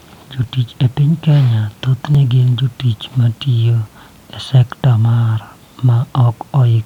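Speech, with a regular click or pop roughly every 1.72 s from 0.43 s to 5.58 s, about four in all. These are likely clock drift buffer slips: two devices running several hundred parts per million apart, so their shared buffer periodically drops or repeats a few dozen samples.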